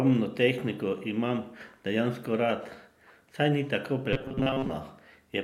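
From 4.13 s to 4.71 s, right after "saj ni tako", the speech turns into a rigid, metallic buzz pitched at 133 Hz that still loosely tracks the words. This is robotic sound from repeated short buffers. The likely cause is audio arriving too seldom, so the player loops a fragment of about 7.5 ms, the length that sets that 133 Hz pitch. Most of the real audio in that stretch is skipped rather than played.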